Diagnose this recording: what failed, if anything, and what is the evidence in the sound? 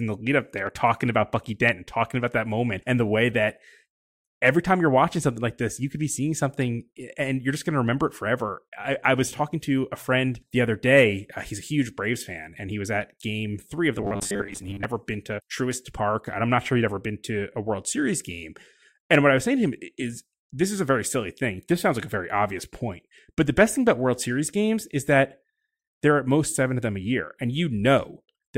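After "game three of the", from 13.98 to 14.85 s, speech becomes a rigid 100 Hz metallic buzz: robotic sound from repeated short buffers, likely a driver or buffer underrun repeating 10 ms blocks.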